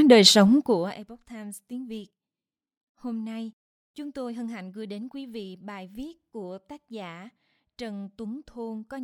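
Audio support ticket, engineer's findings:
Zipper noise, 0.47–1.09 s: rapid ticking over the speech during a roughly 20 dB level drop, around 70 steps a second. Likely cause: unsmoothed gain stage updating once per buffer. Ticks track the moving level.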